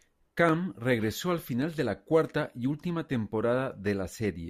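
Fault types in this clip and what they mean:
Clock drift buffer slips: a short click recurs at a steady interval of about 1.12 s, four times between 0.49 s and 3.87 s in this speech. The likely cause is two devices running on separate clocks that disagree by a few hundred parts per million, so the buffer between them slowly drifts until a small block of around fifteen samples is dropped or repeated. Each such jump in the waveform produces one click.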